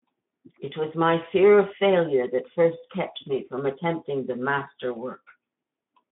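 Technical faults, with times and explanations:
Nothing stood out on listening to this speech.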